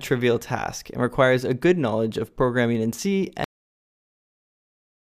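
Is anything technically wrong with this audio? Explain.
Yes. Cut-off end at 3.44 s: the final buffers were never written out, so playback stops partway through a sound. Instead of decaying naturally, the audio falls straight to digital silence, which fills the remaining 1.7 seconds with nothing at all.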